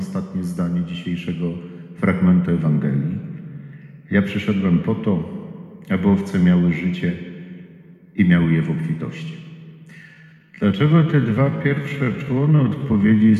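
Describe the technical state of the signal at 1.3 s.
Around 1.3 s the signal is intact, with no audible technical fault at that point.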